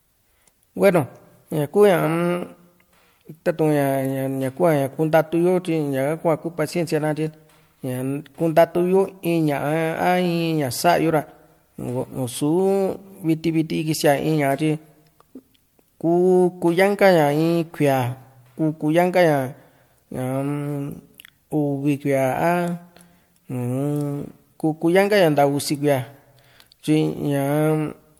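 From start to finish the speech sounds swirly, smeared and hollow, and consonant attacks blur. Content stops near 20 kHz. This is likely generation loss: repeated lossy encoding, about four passes, each requantising on a fresh frame grid. It fits 96 kbit/s MP3.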